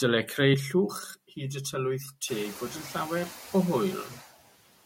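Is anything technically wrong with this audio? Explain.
Yes, two processing faults are audible in this speech clip.

Noise suppressor artifacts run through the whole clip. A suppressor estimates which frequency bands hold steady noise and turns them down frame by frame, here by about 15 dB. The background therefore ducks in the gaps and comes back under the speech. The room noise itself jumps by about 20 dB at roughly 2.5 s and sits about 18 dB below the speech.

Channel delay (comb filtering) begins at 0.54 s and lasts to the end. One channel arrives around 5 ms late, and when the two are summed to mono, the shared content cancels at evenly spaced frequencies. The first notch falls near 100 Hz, and further notches follow at regular intervals up the spectrum. These fixed gaps make the speech sound hollow and phasey from that point on.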